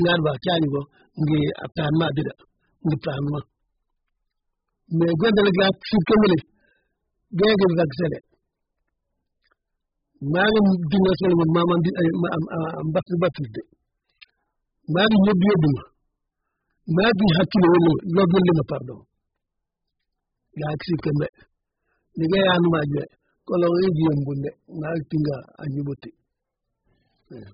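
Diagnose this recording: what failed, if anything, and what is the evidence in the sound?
The speech sounds dull throughout, with nothing above 5 kHz. A spectrogram shows a flat ceiling at that frequency and patchy, smeared bands below it. This heavy damage at the codec stage is likely AAC compression, squeezed to a rate that fits an 8 kbps AAC-LC stream.

Pre-echo appears at 6.06 s, where a short hiss of about 11 ms runs into a sharp attack that then lands soft. On the waveform, low-level noise rises just before the onset. The codec spread its quantisation noise across the whole transform block, filling the quiet moment before the transient.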